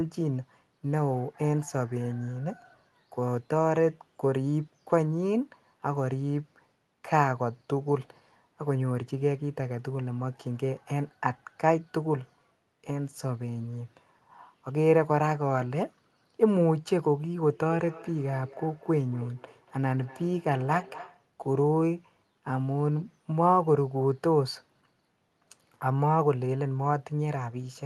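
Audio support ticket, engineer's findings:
Feedback echo between two devices, 17.48–21.31 s. Second device in the same room on the call plays the far-end audio; the first device's microphone re-captures it, and neither device's echo canceller removes the other's playback. Result: speech returns at a fixed interval of roughly a fifth of a second, each pass thinner and more ringing, peaking at about 19 dB below the speech.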